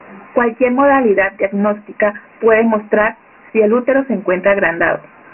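From start to finish the speech carries Dialogic VOX ADPCM damage: nothing above 3 kHz, and the low end thins out around 200 Hz. A heavy gritty hiss rides on the speech and moves with it. Unlike clean telephone band-limiting, the grit tracks the speech itself, and the early top edge fits 4-bit coding at 6,000 samples a second.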